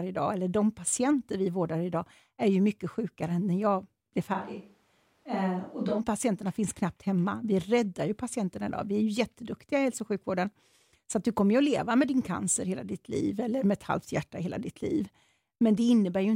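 From 4.35 s to 5.98 s the speech suddenly turns roomy and hollow, losing its low end and dropping by roughly 5 dB, while a faint bed of room noise, around 40 dB below the speech, comes up underneath. At 5.98 s the close, full sound returns just as abruptly. This is likely a switch to a distant microphone: the close microphone's signal dropped out for that stretch, leaving a microphone further away to pick up the speech along with the room.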